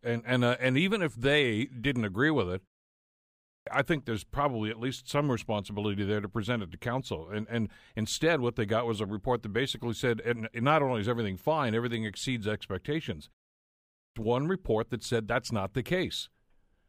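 The speech has a clipped start after a pause at two points: from 3.17 to 3.67 s, after a 0.58 s pause following "didn't agree with it", and from 13.65 to 14.16 s, after a 0.4 s gap following "fine everything exceeds expectations". Each time about half a second of speech is swallowed while the output device wakes, so "I think there's probably" and "one report that said" begin abruptly. Ordinary muted pauses would lose only background, never the opening of speech.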